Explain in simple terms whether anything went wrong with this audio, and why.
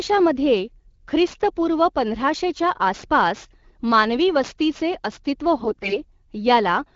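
Two things went wrong here, one lasting the whole clip and one short burst near the end.

The first is sample clock jitter. The clock that paces the converter wobbles by a few millionths of a second, so each sample gets taken slightly early or late. That timing slop matters most when the waveform is changing fast, so you hear a hiss or grittiness riding on the louder, brighter parts of the speech. It drops away in the pauses, from start to finish.

The second is AMR bit errors, from about 5.59 to 6.00 s. The speech is carried by the AMR wideband (HD Voice) codec, which sounds clean and only lightly coloured on its own. In that stretch, though, a weak link flipped roughly one bit in ten in the less protected parts of the data. The core data still checked out as valid, so the phone decoded the frames instead of dropping them. But the fine detail it uses to rebuild the voice was garbled. For those four-tenths of a second the voice keeps about the same pitch and loudness but turns hoarse, scratchy and a bit gargly.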